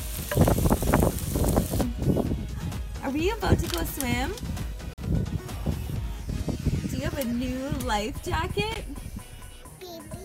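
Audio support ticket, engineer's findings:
Two short silent holes: 4.93–4.98 s (about 44 ms gone), 8.74 s (about 15 ms gone). Sound resumes further on, as if it kept playing. Likely Bluetooth dropout: late packets discarded, roughly three, then one.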